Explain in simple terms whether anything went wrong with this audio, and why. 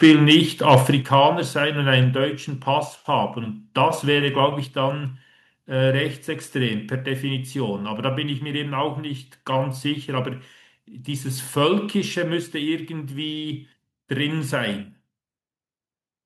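Right at the start, the loudest parts of the speech sound harsh and crackly, from 0.03 to 0.36 s and again, more roughly, from 0.70 to 0.77 s. This is microphone overload. The likely cause is that the microphone's input volume was set too high, so the strongest peaks ran past the top of what the recording could hold. Their tops were flattened, and that flattening is what you hear as the gritty edge.

Shortly after those crackly moments, the whole sound suddenly gets quieter in separate jumps: at 1.02 s, at 2.04 s, and at 6.69 s. The voice and the background both drop together, each time a little less than before. This is the microphone volume being stepped down. The call software likely noticed the earlier overload and turned the microphone's input volume down a notch each time to stop it happening again.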